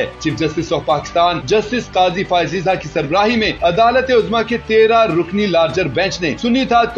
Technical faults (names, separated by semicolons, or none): MP3 compression